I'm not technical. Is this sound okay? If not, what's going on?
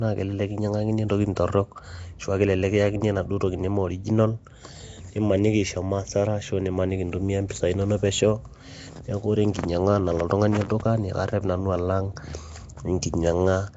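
No. The speech sounds rough and hissy throughout, with a smeared, underwater quality. Nothing above 7.7 kHz survives, so it also sounds dull. This is Nellymoser compression, likely from Flash's old speech format, which fills the weak frequency bands with noise.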